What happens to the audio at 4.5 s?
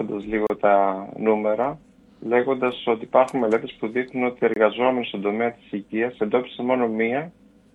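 A gap between stream segments opens from 4.54 to 4.56 s: two consecutive segments, which fit a 4-second segment length, have time stamps that leave about 24 ms unaccounted for, and the player fills it with silence. The sound drops out abruptly with hard edges, then resumes with nothing missing.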